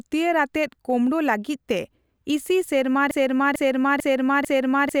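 At 3.11 s the speech snaps into a broken-record loop: a fragment of about 0.45 s starts repeating exactly, back to back, four times, and it keeps going right to the end of the clip. It sounds like a stuck CD skipping. The likely cause is a stall in the player, encoder or stream that left it resending the last chunk it had, so whatever should have followed 3.11 s is simply gone.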